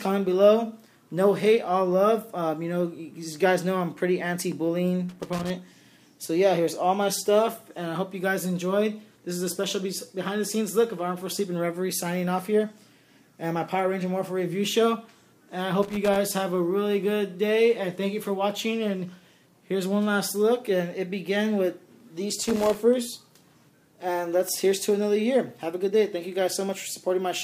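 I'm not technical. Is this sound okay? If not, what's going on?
No. Loose connector crackle appears at 5.09–5.50 s, 15.83–16.16 s and 22.42–22.76 s: a worn or dirty plug contact flickering, chopping the sound into scratchy bursts.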